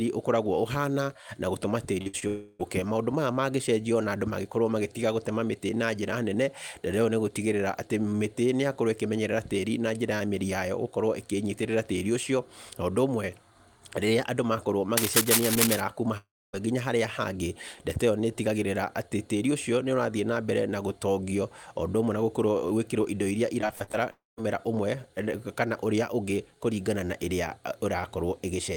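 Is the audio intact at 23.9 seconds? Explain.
No. At 23.9 seconds the speech is inside a burst of repeated packet loss (robotic sound) from 23.61 to 23.95 s. Seven gaps, the longest 42 ms, are patched by extending the preceding sound, concealing about 42% of that span and giving choppy speech with pieces missing.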